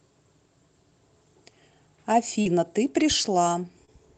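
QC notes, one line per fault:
2.41–2.47 s and 3.85–3.89 s, short concealed packet loss: about 40 ms, then 20 ms, never arrived in time; the decoder extended the preceding sound and blended back, leaving brief smears.
2.45–2.47 s, lost packet rebuilt from error correction: a 20 ms frame was replayed from the low-bitrate copy carried by the following packet, so it is audibly rougher and noisier.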